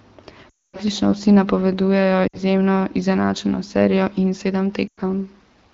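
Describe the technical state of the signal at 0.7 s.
At 0.7 s there are lost AMR speech frames, spanning 0.49 to 0.79 s. The decoder repeats old settings with falling gain. Sound drops to near silence within two frames before "vsi napovedujejo".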